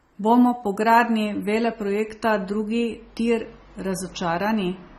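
Throughout, the speech sounds dull and smeared, with a warbling texture. This is likely AAC compression at a low bitrate, stripping treble and leaving spectral holes.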